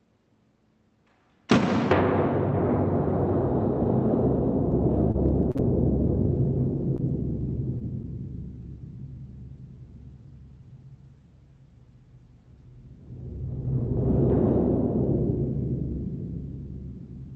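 From 5.11 to 5.61 s the sound turns choppy, with small pieces dropping out. This is repeated packet loss: four gaps in quick succession, the longest 40 ms, each patched by extending the preceding audio, so about a fifth of that half-second is synthetic fill.

Shortly after come three brief smears or wobbles, at 6.97 to 7.01 s, 7.79 to 7.82 s and 8.02 to 8.06 s. Each is short concealed packet loss: roughly 20 ms failed to arrive in time, and the receiver bridged the hole by continuing the last sound before blending back into the real signal.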